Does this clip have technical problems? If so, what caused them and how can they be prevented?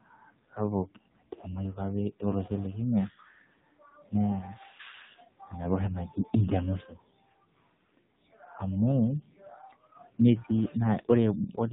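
Yes. AMR narrowband mobile codec damage runs throughout: the speech is heavily buzzy and synthetic, consistent with a low AMR-NB mode near 5.9 kbps rebuilding the voice from a sparse vocal-tract model. A spectrogram shows a flat ceiling at 4 kHz. Prevent it by recording with a wideband codec or higher bitrate.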